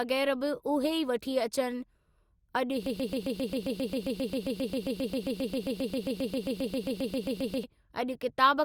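From 2.86 s to 7.64 s the speech sticks in a broken-record loop: one 134 ms fragment repeats 36 times, a mechanical stutter, likely a stalled stream resending its last buffer, and the intended speech is lost. Waveform and spectrogram show that block tiled identically.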